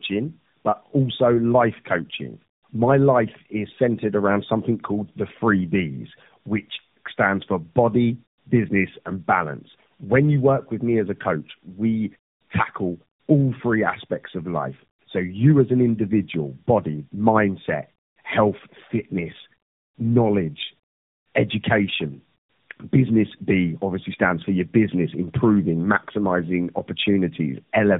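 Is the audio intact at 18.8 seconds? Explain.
No. Tandem speech coding runs through the whole clip, including 18.8 s: the speech passed through an AMR-NB-type coder three times, decoded and recoded at each link. Each pass compounds the last one's damage, leaving speech rough, muffled and warbly, with nothing above 3.8 kHz.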